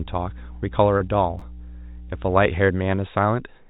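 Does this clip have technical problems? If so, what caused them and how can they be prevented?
Yes. Mains hum sits under the speech from 0 to 2.49 s: a steady 60 Hz tone, fairly strong at roughly 15 dB below the speech, caused by a ground loop or nearby transformer leaking power-line current into the signal. Breaking the ground loop with an isolation transformer or balanced cabling, and moving away from power supplies, prevents it.

Short concealed packet loss occurs from 0.98 to 1.02 s. About 20 ms of audio never reached the decoder in time, and the receiver bridged the gap by extending the preceding sound, leaving a brief smear. A larger jitter buffer or forward error correction on the network path prevents it.

Chunks out of order appear from 1.39 to 1.42 s. A chunk of about 12 ms was written one chunk late, so the sound jumbles briefly at the hard joins. Correct sequence handling in the capture or write buffering prevents it.

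The speech also passed through a call codec that removes everything above 4 kHz, giving it a narrowband, telephone-like quality.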